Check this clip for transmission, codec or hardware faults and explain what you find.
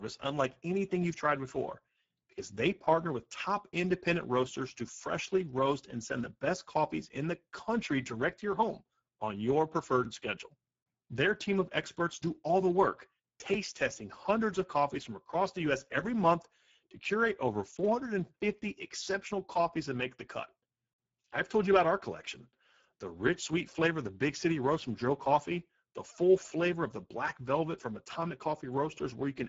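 The speech carries one codec fault for its whole length. Speex coding is plainly audible throughout: a low-bit CELP excitation makes it hoarse and noisy, which fits a rate near 10 kbps. A spectrogram shows nothing above 7.7 kHz and smeared, noise-like energy above 4 kHz.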